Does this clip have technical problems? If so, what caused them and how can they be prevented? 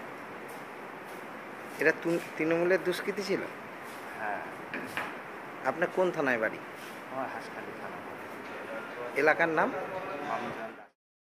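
No, nothing stood out on listening, and the gentle fade-out over roughly the last half second, ending at 10.97 s, is an ordinary editing touch rather than a problem.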